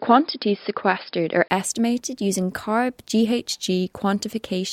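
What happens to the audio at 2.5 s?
A drift correction step likely shifted the playback rate. From 2.04 to 3.26 s, speech runs 5.5% fast and 92 cents sharp before snapping back.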